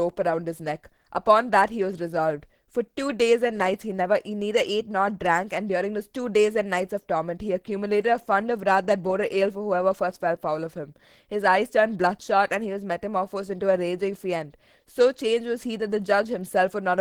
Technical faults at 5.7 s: Opus compression

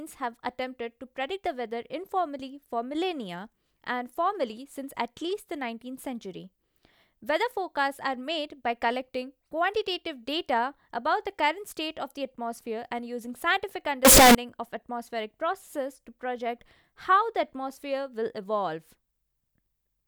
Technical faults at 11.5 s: none

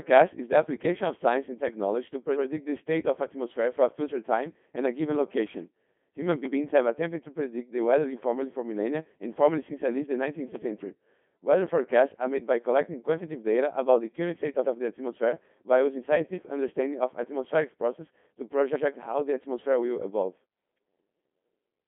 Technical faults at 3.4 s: Codec 2 vocoder

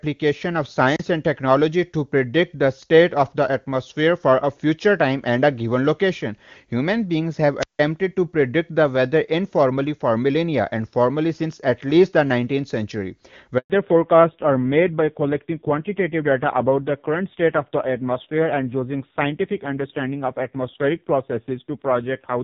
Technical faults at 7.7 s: wireless microphone squelch dropout

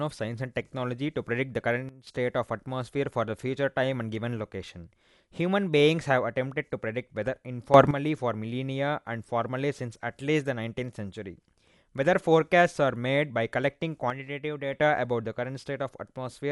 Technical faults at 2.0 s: Dolby Digital compression; sudden gain jump

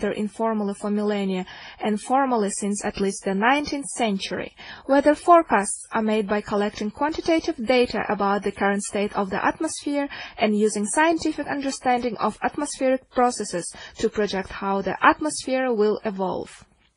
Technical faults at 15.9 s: transcoding between lossy codecs

